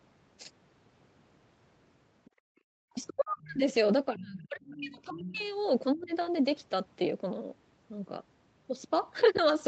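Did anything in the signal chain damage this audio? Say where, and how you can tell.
Yes. Damage occurs at the call-processing stage, in the echo canceller. Other side's voice leaking through appears at 2.25–2.3 s, 3.07–3.13 s, 3.41–3.52 s and 4.66–5.39 s as a faint second voice, roughly 20 to 35 dB below the talker. Loudspeaker playback likely survived incomplete echo cancellation.

The background is gated by the echo canceller from 2.3 to 2.67 s. Room sound drops by about 38 dB, then returns. While the loudspeaker played, the canceller clamped the microphone path, so the ambience vanishes instead of staying at a steady floor.

Speech is suppressed in double talk at 2.95–3.63 s, 4.13–5.42 s and 5.93–6.13 s. The talker dips or breaks up by roughly 25 to 40 dB. Likely cause: the canceller couldn't separate near-end speech from echo and attenuated both.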